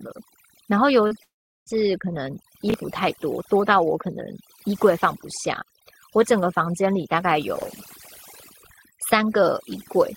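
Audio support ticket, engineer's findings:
Overdone noise removal, whole clip: background near silent with twinkling specks. Denoiser set too strong, zeroing bands near its noise estimate, taking quiet speech with them. Spectrogram: black gaps between harmonics, isolated flickering tiles in pauses.

Short concealed packet loss, 1.07 to 1.14 s: brief smear where roughly 40 ms never arrived in time. Decoder filled about 33 ms by extending the last sound, then blended back. Spectrogram: last sound stretched across the gap, soft seam at the end.

Long network dropout, 1.23 to 1.69 s: buzz or hiss fading into about 380 ms of silence, audio resuming with roughly 440 ms gone, likely a network outage. Concealment extends the last sound briefly, then mutes. Waveform: decaying tail, flat line, abrupt restart.

Chunks out of order, 2.70 to 2.74 s and 7.56 to 7.64 s: garbled moments. 20 ms chunks written late, one chunk behind at 2.70 s, three at 7.56 s, probably buffering or jitter handling. 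Waveform: three hard discontinuities per event; spectrogram: vertical broadband lines, misplaced formant segment.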